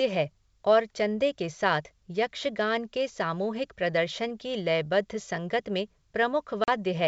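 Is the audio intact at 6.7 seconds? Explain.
No, packet loss on an ADPCM call cuts a hard-edged silent gap from 6.64 to 6.69 s, about two packets' worth. Unlike a plain dropout, the speech resumes with brief distortion while the decoder's predictor and step size resynchronise.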